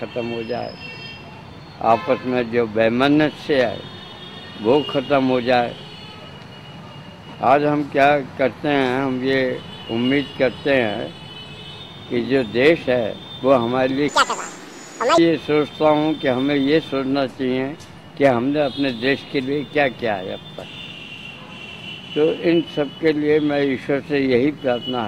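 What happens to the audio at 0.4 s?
Nothing goes wrong at 0.4 s; the audio plays through that moment intact, with no dropout, click, distortion or other fault.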